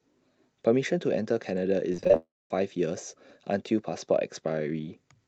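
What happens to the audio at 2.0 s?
Packets were repeatedly lost or late from 1.92 to 2.16 s: eight short gaps, the longest about 23 ms, each patched by stretching the preceding speech. With roughly 41% of that stretch concealed, the speech turns choppy and robotic, with pieces missing.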